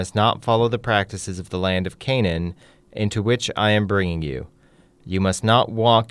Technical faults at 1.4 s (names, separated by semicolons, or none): none